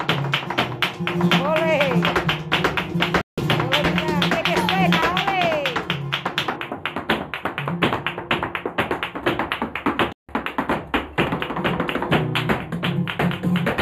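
Digital broadcast dropout at 3.21 to 3.38 s: the receiver lost valid frames and muted, so the sound fades out in about 3 ms and leaves a hole of roughly 160 ms.

Channel delay (comb filtering) from 6.56 s to the end: one channel lags by a few samples, about a tenth of a millisecond, and summing to mono cuts a fixed notch near 5 kHz, so the sound turns hollow or phasey.

A second digital broadcast dropout at 10.12 to 10.29 s repeats the same quick mute and gap of about 160 ms.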